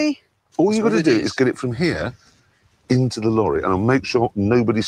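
A noise suppressor designed for speech is active across the whole clip and is applied to audio it was not built for. It treats sustained tones and ambient decay as noise, so its gain moves through a range of roughly 15 dB. Transients pass largely intact, while held material and tails are pulled down. The result is a pumping, unstable level with a thinned body throughout.

The first instance of sound cut by the noise suppressor runs from 0.15 to 0.58 s. For nearly half a second, the suppressor classifies the steady content as noise and attenuates it harder than the surrounding material, with the deepest drop reaching about 19 dB. The sound sinks, and any decay is truncated rather than allowed to fade.

A second cut follows from 2.14 to 2.9 s and covers roughly 0.7 s. The attenuation peaks at about 18 dB. Sustained components collapse in level again while onsets remain audible, which leaves a hollow, gated dip before the level recovers.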